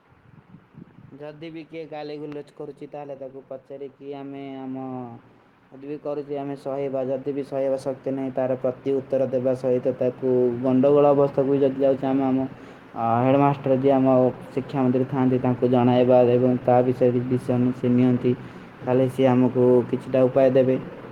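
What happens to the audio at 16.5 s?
Nothing goes wrong at 16.5 s; the speech runs on intact through that moment with no dropout, click or distortion.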